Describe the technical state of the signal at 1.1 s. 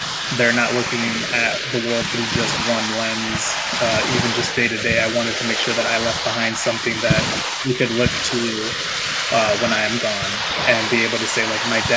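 At 1.1 s the speech carries an echo leak, running from 0.00 to 4.83 s: a fainter copy, roughly 10 dB down, trails the speech by 218 ms, likely from a loudspeaker echo the canceller missed. The spectrogram shows ghosted, time-shifted repeats of the harmonics.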